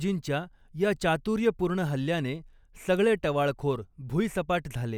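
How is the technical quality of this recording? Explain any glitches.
The technical quality of this recording holds up, with no glitches to explain.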